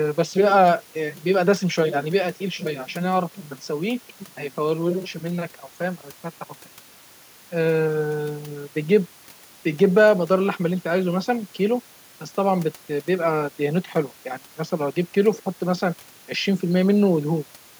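Nothing technical goes wrong anywhere in this speech recording, so there's no fault to point to at any moment along the way.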